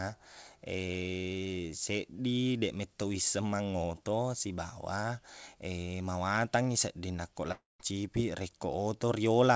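A speech recording. Just after "sedding nakko", the sound breaks from 7.52 to 7.81 s. It smears into a fading buzz, then about 180 ms of near silence, and resumes with roughly 280 ms lost. This is likely a long network dropout.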